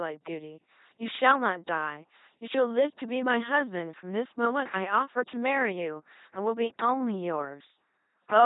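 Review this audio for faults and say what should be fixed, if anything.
LPC-10 vocoder damage runs through the whole speech clip. Each frame is rebuilt from a pulse buzz or noise through a short all-pole filter, which fits a 2.4 kbit/s stream. The spectrogram shows rigid, evenly spaced harmonics, blurred formants and nothing above 3.8 kHz. To prevent it, carry the speech on a modern wideband codec at a higher bitrate.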